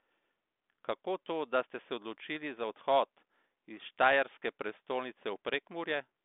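No technical faults are audible.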